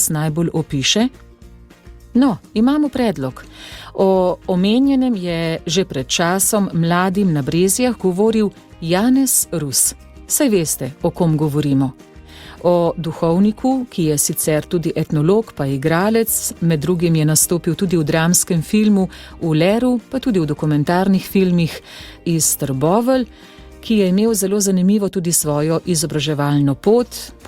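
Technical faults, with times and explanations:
No technical faults detected in the recording.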